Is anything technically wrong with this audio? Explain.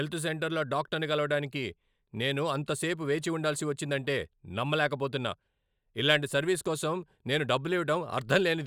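No, nothing technically wrong stood out on listening to this speech recording.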